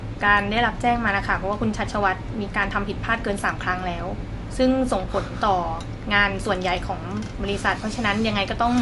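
From start to finish the speech carries plainly audible damage that is likely MP3 compression. Nothing survives above 11.3 kHz, a hard treble ceiling of the kind an encoder imposes when bits run short, which fits a low bitrate near 50 kbps. Weak frequency lines drop in and out between frames, leaving a watery, swirling texture and metallic chirps on s sounds. That flicker sets it apart from a simple low-pass filter, which would dull the top end but leave the rest steady.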